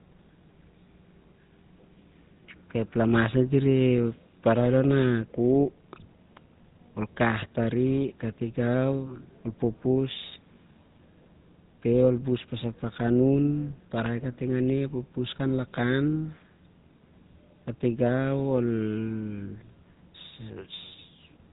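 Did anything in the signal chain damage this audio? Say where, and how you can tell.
Yes. The damage sits at the codec stage and runs through the whole speech clip: it has the buzzy, gravelly roughness of the GSM full-rate codec, with nothing above 4 kHz. The codec rebuilds the voice from a vocal-tract model excited by sparse, regularly spaced pulses, so the fine texture is replaced by a mechanical rasp, which fits the 13 kbps full-rate scheme. Plain telephone band-limiting would sound muffled but clean, without this grainy buzz.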